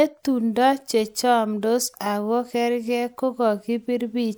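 Nothing stood out on listening to this speech recording.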